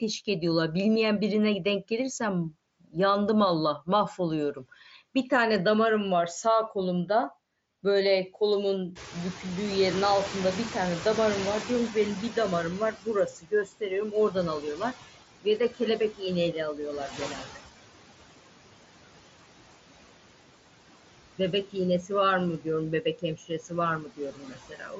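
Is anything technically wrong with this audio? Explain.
Yes. The noise suppressor misbehaves in several ways.

Noise suppressor artifacts run through the whole clip: the suppressor cuts the bands it judges steady noise by about 18 dB frame by frame, so the residual noise ducks between phrases.

The noise suppressor is catching up from 8.95 to 12.96 s. The room noise jumps by about 22 dB near 9 s, and the suppressor's estimate needs about 4 s to follow. The noise therefore comes through with less reduction at first, then sinks once the reduction reaches about 13 dB.

Speech is cut by the noise suppressor at 11.63–12.37 s, 12.92–17.61 s and 21.38–24.99 s. Mistaking speech for noise, the suppressor pulls parts of it down by about 9, 19 and 14 dB respectively. Over roughly a tenth of a second in the first stretch, and around a second and a half in each of the others, soft sounds and word endings become faint or swallowed. 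On the mSBC headset link, nothing is heard above 7.7 kHz.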